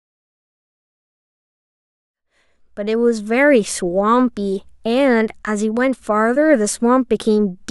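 Nothing stood out on listening to this speech clip, apart from a smooth fade-in that begins at around 2 s and reaches full level by 3.48 s, as an editor would shape it.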